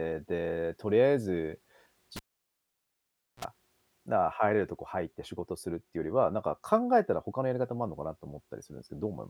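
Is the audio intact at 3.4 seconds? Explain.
No, 3.4 s falls inside a cable pulled and plugged in, from 2.16 to 3.45 s: a pop, about 1.2 s of near silence, a brief 60 Hz buzz as the tip touches, then another pop.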